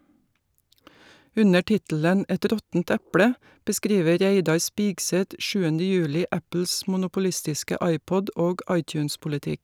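No technical faults can be heard anywhere in this recording.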